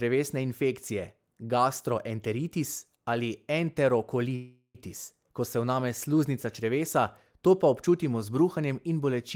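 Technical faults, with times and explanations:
4.35 to 4.77 s, call audio freeze: the last sound is stretched into a fading buzz or hiss that ends in a brief 60 ms silence, about 390 ms of fill in all. The speech then resumes exactly where it stopped, so everything after this point runs about 390 ms later. This fits packets stalling in transit and the jitter buffer running dry, likely. Unlike a packet-loss dropout, nothing is skipped. A pause is inserted, not a piece removed.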